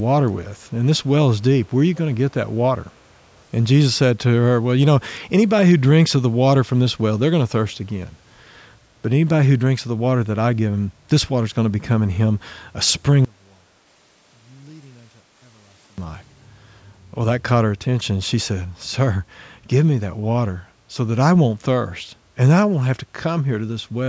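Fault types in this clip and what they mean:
Echo leak: A faint, delayed copy of the speech appears briefly around 1.94 to 2.0 s, trailing the original by 477 ms and sitting well below it. The likely cause is a far-end echo canceller letting some of its loudspeaker pickup return down the line.
One channel inverted: From 13.25 to 15.98 s the speech collapses by about 30 dB, leaving only a faint residue. This is likely one stereo channel with reversed polarity, so the centred speech cancels when the channels are summed to mono.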